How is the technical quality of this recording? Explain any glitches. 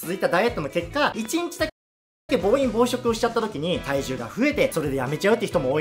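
Two clear glitches spoil the recording. At 1.25 to 1.28 s there is a loud pop. It is a single sharp click, peaking a few decibels above the surrounding sound. The sound carries on beneath it. It is likely a voltage spike from a plug, switch or static discharge. Shortly after, at 1.69 s, a playback stall begins. The audio cuts to silence mid-flow for about 0.59 s, until 2.30 s, then resumes. The player likely ran out of buffered data or had its thread blocked.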